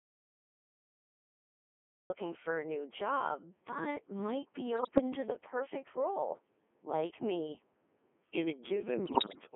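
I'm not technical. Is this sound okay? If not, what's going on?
No, there's quite a bit wrong with it, so don't worry if it sounds strange to you.

First, the whole recording has been through the Codec 2 vocoder, a voice codec built for digital radio. Instead of keeping the actual sound wave, it sends a rough description of the voice (its pitch, loudness and general tone) and rebuilds it at the other end from simple tones. That's why the voice here sounds robotic and buzzy all the way through, and it's been squeezed into a narrow telephone-like range, so it lacks both deep and crisp sounds.

Second, the clip opens with an audio dropout to silence. From the very start until about 2.1 seconds there's nothing at all, not even background hiss, and it was already silent when the recording began. That dead, total quiet most likely means the input was lost for a moment, perhaps a loose connection, a dropped link or something muted by accident, while the recorder kept running.

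Third, from about 2.25 seconds to the end there's a time-stretched section. The speech has been slowed to roughly two-thirds of its normal pace, but the pitch wasn't lowered. The software that likely did this keeps the pitch by repeating tiny slices of sound, so the slowed part feels drawn out rather than deeper.

Finally, there are two bursts of bit errors on digital voice radio, at about 4.75 to 5.01 seconds and again at about 9.06 to 9.41 seconds. This happens when a radio signal is weak and some of the data arrives scrambled. Because each scrap of data controls the pitch, loudness or tone of a short stretch of voice, the voice suddenly jumps around, warbles and turns into robotic gibberish. The first burst has fewer errors, and the second near the end is heavier.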